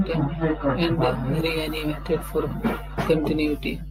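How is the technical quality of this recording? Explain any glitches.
Not great, since mains hum sits under the speech from start to finish. It's a steady 50 Hz tone with low harmonics, fairly prominent at about 10 dB below the speech, the kind of thing a ground loop or a nearby transformer leaks into the signal path.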